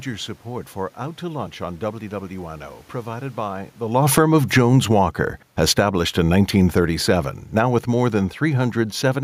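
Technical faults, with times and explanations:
3.98 to 9.19 s, automatic gain falling: just after "provided by the", the automatic gain control steadily pulls its gain down by about 12 dB, so the speech and the room noise behind it sink together.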